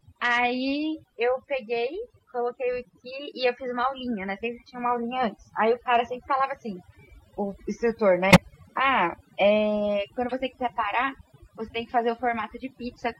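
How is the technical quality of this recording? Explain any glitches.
The recording has two kinds of fault: heavy processing across the whole clip and two short decoding glitches.

Throughout the speech, the background sinks to near silence dotted with twinkling specks. That is overdone noise removal. A noise reduction stage set too aggressively pulls individual frequency bands down or out whenever they sit close to its noise estimate, so the softer parts of the voice are cut away along with the noise.

From 8.31 to 8.38 s there is a loud glitch, and at 10.29 to 10.34 s a much fainter one. Each is a corrupt frame decoded: damaged bits in the compressed stream were played rather than concealed, so misread gains and codes put energy at the wrong frequencies. The first glitch spans roughly three frames and the second about two, which sets how long each one lasts.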